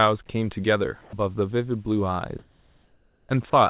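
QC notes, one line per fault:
0.26–0.29 s and 1.01–1.13 s, sound dropped by the voice detector: the speech briefly gives way to flat, steady noise for 30 ms and then 120 ms. The likely cause is the sender's detector mistaking part of the sound for background and halting transmission while the receiver filled in comfort noise.
2.39–3.29 s, comfort noise in place of the background: for about 0.9 s the room tone turns smooth and featureless, shifted about 1 dB in level and sitting about 34 dB below the loud parts. This is likely discontinuous transmission, where synthetic noise stands in for the real background during the pause.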